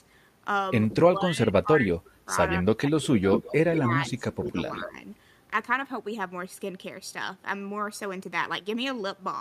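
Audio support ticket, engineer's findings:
Speech suppressed in double talk, 1.1 to 4.95 s. Talker's speech dips in pieces, deepest drop about 20 dB, roughly two seconds affected in total. Likely the echo canceller misreading overlapping talk as echo. Ducks talker and echo together.

Echo leak, 3.32 to 4.84 s. Delayed copy of the speech, 178 ms behind, about 10 dB below it. Likely the loudspeaker side's echo canceller not removing all the loudspeaker pickup. Residual sent back down the line.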